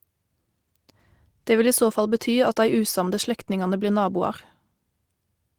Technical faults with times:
2.15-2.17 lost packet rebuilt from error correction

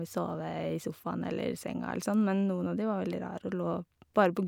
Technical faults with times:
none

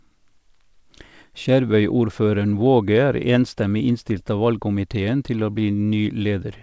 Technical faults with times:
none

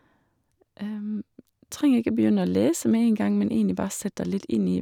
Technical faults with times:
none

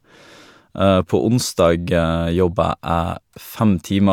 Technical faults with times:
none

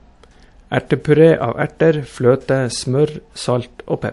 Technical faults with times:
0.00-4.12 transcoding between lossy codecs

